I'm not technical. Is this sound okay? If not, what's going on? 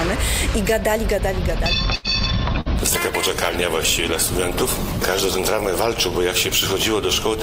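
No. From 1.95 to 2.07 s, a sound hangs on for about a tenth of a second before carrying on. That's a short stall from a late packet: a chunk of audio arrived late, so the playback stretched the last sound while waiting, and nothing was lost.

From 2.54 to 5.51 s, everything turns rough, watery and duller, as if the top end were shaved off, and then clears up. This is a call bitrate drop: the connection suddenly seemed slower, so the audio was squeezed into far less data until it recovered.

Right at the start of that dull stretch, from 2.61 to 2.68 s, the last sound is briefly held and fades, then jumps ahead. That's a burst of packet loss: several pieces were lost or came too late, so the gap was filled with an extension of the last sound and about 40 ms is missing.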